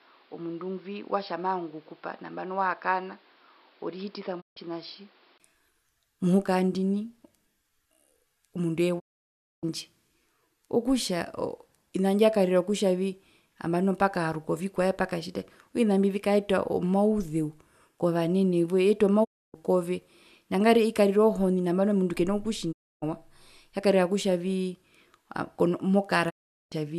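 For the first 5.4 s the speech sounds dull and boxy, with nothing above 5.4 kHz, added background noise about 30 dB down and a level about 5 dB lower, then clears after a 20 ms gap. The input was likely switched to a poorer device.

The sound fades out over 20 ms and goes silent at 4.40 s (144 ms), 8.98 s (624 ms), 19.23 s (288 ms, before "kove nangarire"), 22.71 s (288 ms, after "mundu kena") and 26.29 s (408 ms). These are digital broadcast dropouts: the receiver muted on lost frames, with gap lengths that fit 24 ms frames.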